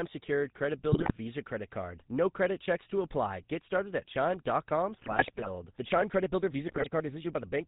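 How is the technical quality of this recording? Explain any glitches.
The quality is poor: the speech is band-limited and rough throughout, with three bursts of corruption on top.

From start to finish the speech has a buzzy, gravelly edge and nothing above 4 kHz, the sound of the GSM full-rate codec at 13 kbps. It rebuilds the vocal tract from a filter driven by sparse, regularly spaced pulses, so fine detail in the excitation is lost and the harshness is plainly audible.

At 0.92 to 1.11 s, 5.01 to 5.47 s and 6.68 to 6.87 s the speech breaks into squawks, pops and gargling. These are GSM bit errors. Corrupted filter, pitch or gain values reach the decoder and warp the spectrum or level frame by frame. The damage fits a bit error rate of around 3 percent, and the middle burst is the longest.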